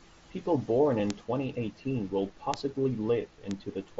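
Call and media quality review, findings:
Concealed Bluetooth headset packet loss at 0.99 s, about 7.5 ms, pointing to a single lost frame. The receiver patched the gap with a repeated stretch of the preceding waveform, so it is nearly inaudible. On a waveform it shows as a short repeated cycle, and on a spectrogram as a faint smear. The mSBC headset link carrying the audio shows only its light graininess.

Bit error spikes at 1.10 s, 2.54 s and 3.51 s. Each is one sharp tick unrelated to the speech, most likely from a flipped bit on the digital path. The one at 2.54 s spans three samples. On the waveform each is a lone vertical spike that jumps and returns. On a spectrogram each is a thin full-band vertical line.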